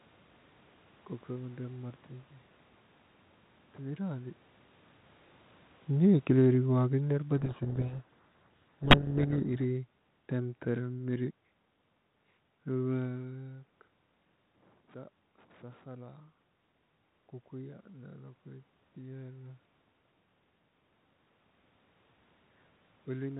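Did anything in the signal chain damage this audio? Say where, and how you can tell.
Yes. Between 6.06 and 11.3 s the call processing stage shows automatic gain falling. From the start of that span the level sinks steadily by about 9 dB, and the room noise beneath the speech drops with it. That shared decline separates it from the talker movements near 4 and 13 s, where only the voice changes level. The control judged the input too loud, or its background too strong, and wound its gain down gradually, not in a single step.

At the codec stage, from 7.38 to 9.56 s, there is a codec payload misread. The speech is buried in harsh, gritty distortion, and then it clears abruptly. The band-limited, lightly hissy character outside this window fits G.726 at around 32 kbit/s. Inside the window, the decoder is taking each code word with its bits in reversed order. It still produces a plausible-looking signal, but the difference values are wrong until both sides use the same bit order again.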